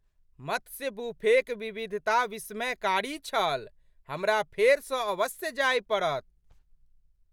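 No technical faults are audible.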